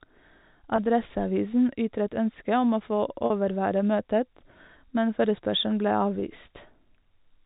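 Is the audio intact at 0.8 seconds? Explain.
No. Around 0.76 to 0.78 s, a packet loss with pitch repetition occurs: about 20 ms of audio, which fits a single lost packet, went missing, and the receiver filled the gap by repeating the last pitch period. The speech briefly sounds held and slightly buzzy.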